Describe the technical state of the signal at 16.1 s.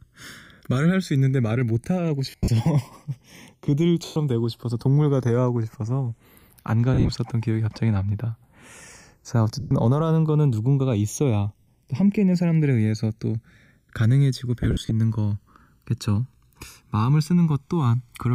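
At 16.1 s the channels drifting apart fault is present, as it is across the whole speech clip. The two sides run on clocks that disagree by something like 70 ppm, so the gap between them keeps widening, reaching about a millisecond near the end. Heard in mono, the comb notches sweep slowly through the spectrum like slow flanging. Unlike a fixed channel offset, the colouration keeps moving, and unlike a flanger effect it travels one way rather than oscillating.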